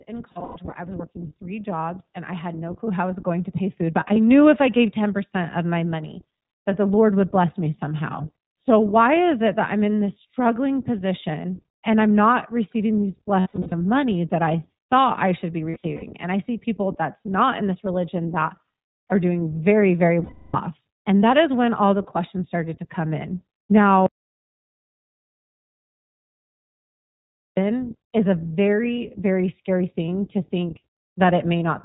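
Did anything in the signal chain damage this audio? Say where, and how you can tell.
Yes. The iLBC codec, throughout, is plainly audible: the band stops at 4 kHz and speech sounds rough and synthetic, from independently coded 20 ms frames at 15.2 kbps.

Automatic gain rising, 0.07 to 11.57 s: the call processing's gain control raises voice and background together by about 10 dB as it compensates for quiet input.

Lost iLBC frames, at the network stage: 0.32–0.74 s, 4.00–4.18 s, 13.40–13.74 s after "I'm not receiving these", 15.70–16.04 s after "thought I should be", and 20.24–20.57 s after "are doing very very". The decoder fills each gap with a held, buzzy, repeated pitch cycle and recovers at once.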